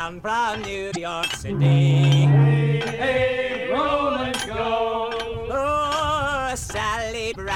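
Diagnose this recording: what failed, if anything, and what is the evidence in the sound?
Damaged data in a compressed stream at 0.88 to 0.97 s and again at 7.28 to 7.37 s, each about 95 ms long. At the codec stage, corrupted bytes made the decoder misread those frames and lose sync until it found the next valid frame header.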